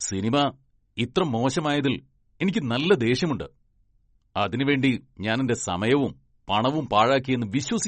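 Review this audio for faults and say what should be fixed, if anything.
Likely MP3 compression at a starved bitrate, around 36 kbps, throughout: treble stops at 8.3 kHz and flickering weak components make the speech watery and swirly. Encode at a higher bitrate, or keep a lossless copy, to prevent it.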